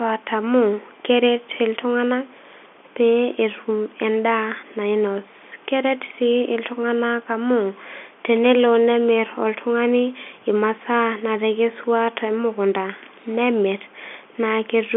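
No technical faults can be heard in this speech clip.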